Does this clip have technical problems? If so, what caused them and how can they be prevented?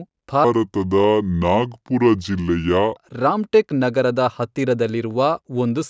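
Yes. From 0.44 to 2.97 s there is a wrong sample rate fault: the samples are played slower than they were captured, with no conversion, which fits 22 kHz audio played at 16 kHz. The speech runs at 0.73 times normal speed and drops about 5.6 semitones, sounding low and dragged. To prevent it, read the source rate and resample to the output rate before playback.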